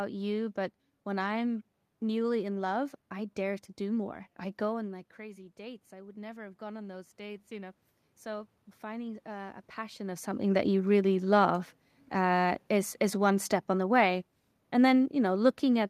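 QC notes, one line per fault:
4.0–10.34 s, automatic gain rising: after "i dare to do", gain control slowly adds about 9 dB to offset an input drop of about 14 dB, so voice and room noise swell together.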